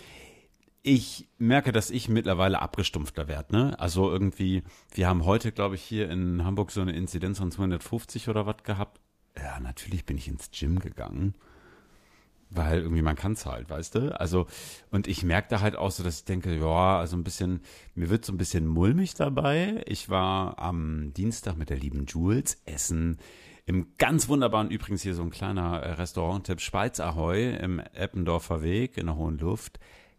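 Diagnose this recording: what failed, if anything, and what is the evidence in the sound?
Nothing in the recording stood out as a fault on listening.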